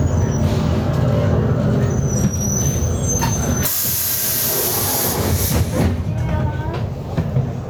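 Gain pumping runs throughout this recording of sounds: the level swings by around 15 dB, leaving everything squashed. The likely cause is input gain set far too high, with a fast limiter clamping down on each peak.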